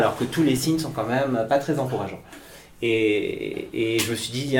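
At 0.57 s and 3.39 s, compressed frames are skipped. About one 20 ms frame is dropped each time, so the audio jumps ahead.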